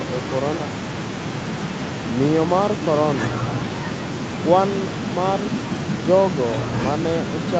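No technical faults can be heard in this speech clip.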